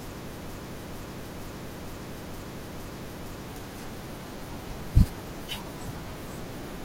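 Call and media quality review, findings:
Broken-record loop, 0.49–3.48 s. Speech stops advancing; one 0.46 s fragment repeats back to back, six times, with no gaps and identical each pass. Likely cause: player, encoder or stream stalled and kept re-emitting its last held buffer until data resumed. The audio due in that roughly 3 s window is lost, not delayed; playback picks up afterward with a jump in content. Check buffer underrun handling and stall recovery in the playout path.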